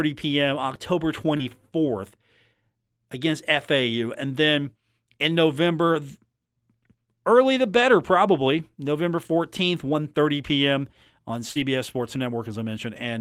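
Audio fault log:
1.37–1.41 s and 11.51–11.57 s, short concealed packet loss: about 20 ms of sound, then about 40 ms, did not arrive in time to be decoded. The receiver bridged each hole by extending the preceding sound, following its pitch where voiced and using shaped noise where not, before crossfading back into real audio. The result is a brief smear or wobble at each point, longer at 11.5 s.
1.39–1.41 s and 11.55–11.61 s, lost packet rebuilt from error correction: in these spans, 20 ms and then 40 ms of audio were restored from low-bitrate redundant copies carried in the following packets, as Opus in-band forward error correction does. The second span fits two 20 ms packets. Because those copies were played, there is no silence. The restored frames sound coarser and noisier than the surrounding audio because of the reduced bitrate of the copies.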